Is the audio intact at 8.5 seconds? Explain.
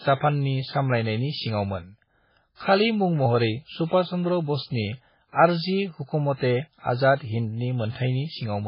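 No. Like the rest of the clip, 8.5 s carries heavy MP3 compression damage, likely from a very low bitrate around 16 kbps. Nothing survives above 5.3 kHz, and the speech sounds watery and swirly.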